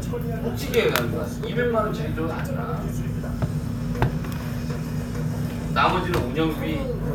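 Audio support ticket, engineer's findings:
Clock drift buffer slips, 0.68 to 6.03 s: regular clicks every 1.79 s, about four in total. Likely two devices on independent clocks, off by a few hundred ppm. The buffer between them drops or repeats a few tens of samples at each slip.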